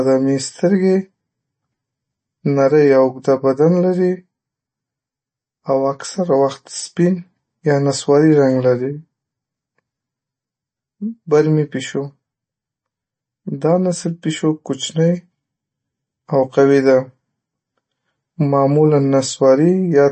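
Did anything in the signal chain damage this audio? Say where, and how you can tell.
Yes, at the codec stage, and it runs the whole length of this speech clip. There's a hard ceiling with nothing above about 8.3 kHz, and the damage is plainly audible: a swirly, watery texture and chirpy sibilants. That's MP3 compression, likely at a starved bitrate around 32 kbps. Short on bits, the encoder lops off the treble at a fixed point and drops weak frequency lines that flicker in and out between frames, which is where the swirl comes from.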